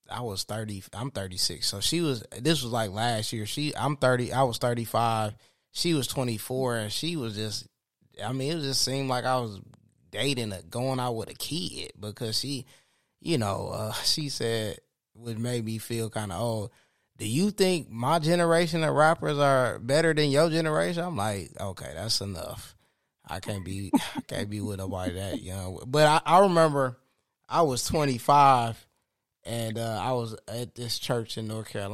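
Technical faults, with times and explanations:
Nothing to flag here; the speech comes through without any technical faults worth pointing out.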